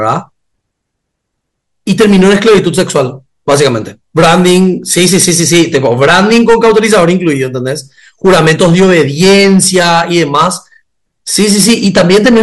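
Hard clipping throughout: speech overdriven about 12 dB, around 7% of samples cut flat into harsh fuzz. Waveform peaks plateau, and the spectrogram smears harmonics upward.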